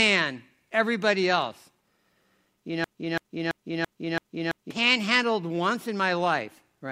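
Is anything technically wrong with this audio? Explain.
Yes. From 2.84 to 4.71 s, a broken-record loop repeats one 0.33 s fragment six times, likely from a stalled player resending held audio, and the speech underneath is lost.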